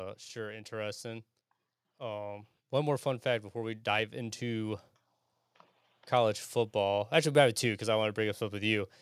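A speech recording in which automatic gain rising sets in from 1.98 s to 4.85 s: the gain control judged the input too quiet and lifted its gain steadily by about 6 dB over nearly three seconds. The background noise swells in step with the voice, which is what sets it apart from a talker simply speaking louder, where the room noise would stay at the same level underneath.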